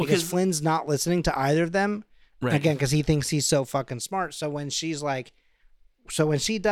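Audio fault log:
Listening through the speech, nothing stood out as a fault at any point.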